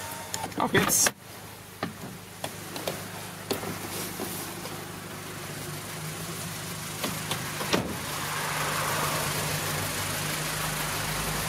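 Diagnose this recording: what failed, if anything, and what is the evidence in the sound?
Gain pumping runs throughout. The gain ducks around 5 dB under loud sounds. Likely cause: excessive input gain driving a fast limiter.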